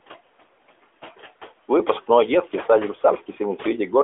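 From start to finish the speech carries noise suppressor artifacts. The suppressor pulls down whatever bands it reads as steady background, about 17 dB here, and it decides frame by frame, so the room noise, sitting about 18 dB under the talker, ducks away in the gaps and creeps back up beneath each phrase. What's left of that noise has the telephone-band narrowness of the AMR narrowband path, nothing above about 3.8 kHz, underneath it.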